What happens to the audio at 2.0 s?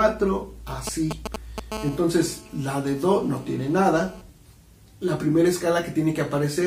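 GSM phone buzz runs from 1.72 s to 4.21 s, so at 2.0 s the sound is overlaid with it. A nearby 2G handset transmits in short radio bursts at about 217 Hz (216.7 Hz). Some part of the audio circuit rectifies those pulses into the signal path. The result is a hard, raspy buzz with a stack of harmonics, unrelated to the sound itself and sitting about 18 dB below it. It stays nearly steady, which points to the phone holding a call rather than transferring data.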